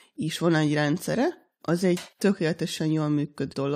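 Damaged data in the compressed stream occurs at 3.52 to 3.54 s, near the end of the speech. Corrupted bytes there leave the decoder unable to read those frames, so it loses sync and hunts for the next valid header, producing a brief glitch.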